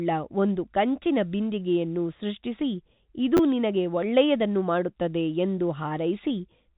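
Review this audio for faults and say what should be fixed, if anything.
Small timing hiccups and a faintly unsteady tempo run through the whole speech clip, with the audio slowly slipping behind. This is clock drift between sender and receiver. The sender's audio clock runs about 2% slower than the receiver's, so the jitter buffer keeps draining and the receiver has to stretch the audio to avoid running dry. The band-limited sound, with nothing above 4 kHz, comes from the call codec itself and is not part of this fault. Prevention: lock both ends to a shared clock, or run an adaptive resampler that tracks the rate mismatch continuously.

From 0.41 s to 6.71 s the pacing feels slightly drawn out, with faint catches where short pieces are repeated. These are repeated timing corrections. The receiver keeps inserting small stretches of audio, all in the same direction and unevenly spaced. The net effect is playback at 98% speed, adding roughly a tenth of a second over the stretch. 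Prevention: replace discrete repeat-based corrections with smooth, inaudible rate adjustment in the playout stage.

Between 3.37 s and 3.39 s there is a brief jumbled moment. These are chunks out of order. A 10 ms chunk arrived one chunk late and was played after the chunk that should have followed it. No audio is lost, but the sequence is scrambled, with hard joins at each boundary. Prevention: reorder packets by sequence number in the jitter buffer before writing them to playback.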